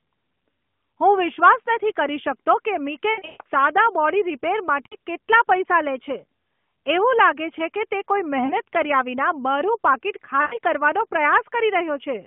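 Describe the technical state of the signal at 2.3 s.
At 2.3 s the speech is intact, with no fault at that moment beyond the narrow telephone band and light coloration of the AMR narrowband mobile codec that carries the whole clip.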